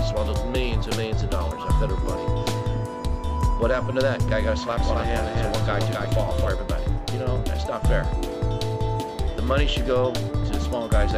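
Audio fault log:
4.80–6.48 s, doubled audio track: for just under two seconds a second full-band copy of the sound runs about 300 ms behind the original, sitting maybe 5 dB down. It's dry, with no decay or room colour to it, so it reads as a flat slapback rather than an echo, and it cuts in and drops out abruptly. That's most likely a second capture through a slower path being mixed back in, or an edit holding two copies out of step.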